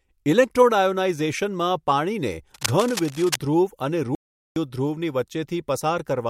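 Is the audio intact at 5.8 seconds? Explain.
Yes, the audio is intact at 5.8 seconds, with no dropout, glitch or distortion at that point.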